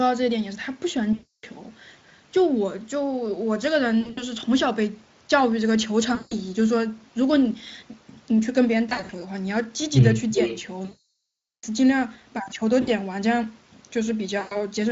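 VoIP packet loss concealed by the speech codec hits this speech clip at 1.13 to 1.45 s, 4.01 to 4.23 s, 6.15 to 6.34 s, 8.89 to 9.11 s, 10.85 to 11.65 s, 12.81 to 12.89 s and 14.39 to 14.65 s. The decoder stretches its last pitch and filter into fading buzz, worst across the long 0.8 s dropout. An echo leak at 10.32 to 10.63 s brings back a copy roughly 10 dB down, 384 ms late, likely from an echo canceller failing to remove loudspeaker sound picked up by the far-end microphone, all over a Speex stream with only light coding damage.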